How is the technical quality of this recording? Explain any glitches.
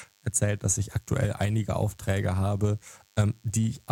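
The speech carries one fault, lasting the whole clip. DECT cordless phone buzz: a nearby handset's radio bursts every 10 ms are rectified into a thin 100 Hz buzz, about 40 dB below the speech, showing as evenly spaced horizontal harmonic lines on a spectrogram.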